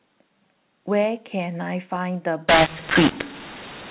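A short speech clip carried over G.711 telephone coding, with nothing above 4 kHz. From 2.49 s to the end at 3.91 s, mu-law and A-law are mixed up. Samples coded as mu-law are decoded as A-law. Levels come out scrambled, some too loud and some too soft. The speech turns harsh and distorted. The quietest samples jump well above silence, so pauses fill with noise.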